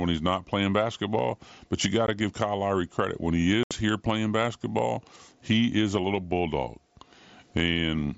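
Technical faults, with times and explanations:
2.07 s and 3.63–3.71 s, unconcealed Bluetooth headset packet loss: voice packets between headset and phone were dropped and nothing was filled in, so the speech has a 15 ms hole and then a 75 ms hole, each with abrupt edges.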